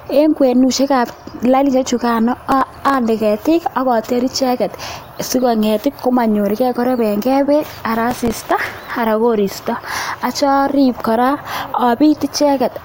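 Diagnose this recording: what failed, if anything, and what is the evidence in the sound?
Processor overload crackle at the driver or buffer stage. Gritty tearing rides over the speech from 2.52 to 2.94 s, right before "ande ketik akoter icheket", and again from 8.11 to 8.91 s. The CPU kept missing very short buffers, roughly 1.5 ms each, replaying stale audio with hard edges.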